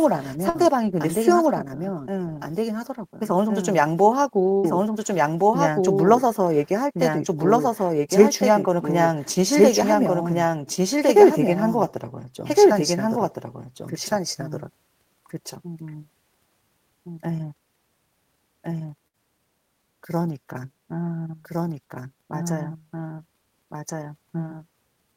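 Throughout the speech, a doubled audio track runs underneath: a second, full-band copy trails about one and a half seconds behind at roughly the same level, with no decay or room colour. The likely cause is the signal being captured twice through a slower path.

A burst of packet loss occurs at 0.49 s, 4.58 s and 19.08 s. Each time, the receiver stretches the last sound for about 50 to 60 ms, fading it into a buzz or hiss, then resumes with about 60 ms of audio missing.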